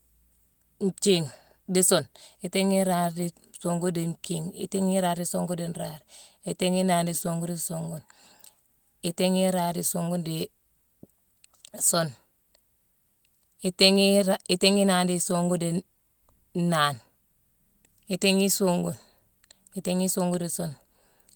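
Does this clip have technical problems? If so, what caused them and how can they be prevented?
No, there is no technical fault to be heard in this speech clip. With nothing going wrong, there is no cause to trace and nothing that needs preventing.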